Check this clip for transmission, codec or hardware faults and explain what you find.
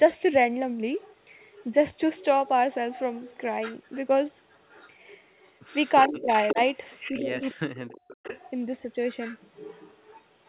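Two faults stand out: a recurring echo of the far end and some chopping of the near talker when both sides speak. Everything tops out around 4 kHz, the narrowband sound you'd expect from a G.711-style call path.

Echo leak appears at 0.98–1.64, 2.17–3.97, 4.5–7.54, 8.1–8.51 and 9.06 s to the end. A faint copy of the speech trails the original by about 359 ms, mostly around 20 dB down. It's quietest in the first stretch, about 30 dB down, and strongest at 8.1–8.51 s, about 15 dB down. That's likely a loudspeaker on one end whose echo canceller isn't catching everything the mic picks up, so the leftover gets sent back.

Speech suppressed in double talk hits at 6.09–6.58 s and 7.11–8.1 s, while that echo is running. The near talker's level dips in pieces. The first stretch loses something like 200 ms, dropping roughly 25 dB at worst. The second is rougher, with around 700 ms affected and drops near 40 dB, so it almost cuts out. 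The likely mechanism is the echo canceller failing to separate the live talker from the loudspeaker echo and clamping down on both.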